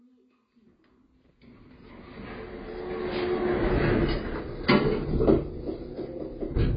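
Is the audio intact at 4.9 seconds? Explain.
No. At 4.9 s, past the fade-in's end at 4.06 s, AAC compression runs throughout: starved quantisation, likely from AAC-LC at around 16 kbps, cuts everything above 5 kHz, leaving dull, fizzy, smeared sound. A spectrogram shows a hard 5 kHz ceiling with holed bands below.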